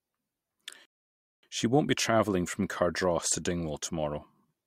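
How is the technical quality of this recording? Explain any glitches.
The recording has one clear glitch, a rebuffering stall. From 0.85 to 1.43 s the speech halts into silence for 0.58 s while playback waits for more data, then picks up exactly where it stopped. Unlike a dropout, no audio is skipped; the gap only adds time.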